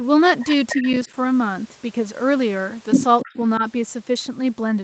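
Echo leak, from 0.69 to 1.0 s and again from 3.2 to 3.36 s: a copy of the speech returns about 300 ms behind the original, roughly 10 dB down in the first stretch and about 15 dB down in the second. This is likely a far end playing the call over a loudspeaker, where the echo canceller failed to strip out everything its microphone picked up and sent the remainder back.

Speech suppressed in double talk, at 0.76 to 0.85 s, 1.06 to 1.1 s, 3.24 to 3.33 s and 3.58 to 3.62 s: the loudspeaker side's voice briefly sinks while the other side talks over it. The dips are shallow, about 5 dB, in the first and last spots, and reach about 10 dB at 1.06 s. At 3.24 s the voice nearly drops out, falling about 25 dB. The likely cause is an echo canceller that could not tell the talker from the echo and turned both down.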